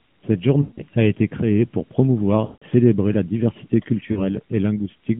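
Lost AMR speech frames hit at 0.62–0.82 s, just before "a été créée pour", and at 2.46–2.64 s, between "a été créée pour" and "la diversité". Failed frames made the decoder stretch the last good sound, then fade it out. A shorter dropout at 4.12–4.24 s, after "la diversité", loses two frames, about 40 ms.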